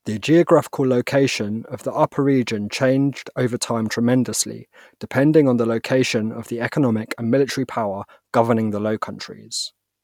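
Nothing technical jumps out in this bit of speech; it just runs along without anything going wrong that a listener would catch.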